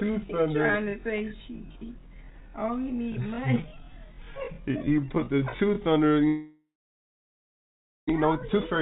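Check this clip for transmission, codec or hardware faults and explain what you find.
Three faults show up, all riding on a call path that sounds like G.711 mu-law at 64 kbps, so nothing above 4 kHz gets through.

From 0.0 to 6.16 s there's a time-stretched section. Playback runs at about 0.66 times the normal pace while the pitch holds steady. That's likely software padding the audio out to a target length by repeating short slices. Slowed that much, the sound drags.

Next, from 6.27 to 8.11 s, there's a long network dropout. The audio stops arriving, and the receiver keeps the last sound going as a fading buzz or hiss. After a few tenths of a second that gives way to about 1.43 s of silence or low steady noise. When the audio comes back, roughly a second of it is simply gone. The likely cause is a stall in delivery, which fits the delay shifting by something like 0.7 s.

Finally, from 8.23 s to the end at 8.81 s, there's a jitter buffer speed-up. 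After the stall, the buffer is holding more audio than it wants, so the receiver trims out short pitch-period-sized chunks again and again to claw back the delay. Playback runs at about 111% with the pitch unchanged, and it sounds hurried and rushed as it catches up.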